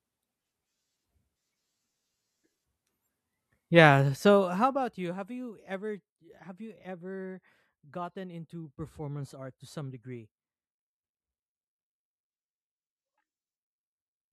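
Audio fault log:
4.18–5.02 s, zipper noise: the speech level falls by around 15 dB in unsmoothed steps, about 40 a second, each leaving a small click that zips audibly.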